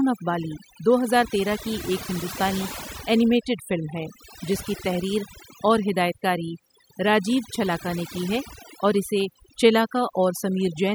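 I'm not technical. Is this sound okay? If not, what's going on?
No. The whole clip suffers from overdone noise removal. Someone ran a cleanup tool on a noisy recording and set it far too strong. The tool shuts off any slice of the sound that looks like background hiss. Quiet parts of the speech look similar, so they get cut too. That is why the pauses sound almost dead, with little sparkly specks in them.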